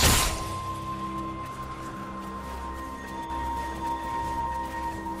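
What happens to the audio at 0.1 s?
Nothing goes wrong at 0.1 s; the audio plays through that moment intact, with no dropout, click or distortion.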